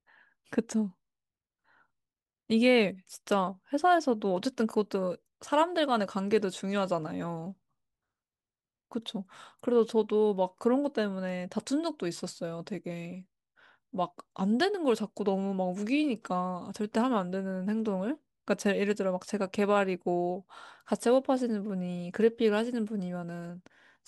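Nothing in this speech recording stands out as a technical fault at any point along the way.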